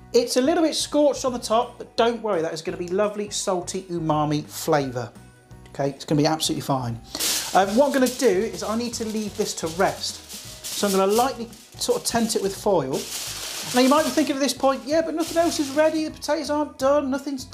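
Nothing in the audio stood out as a technical fault on listening.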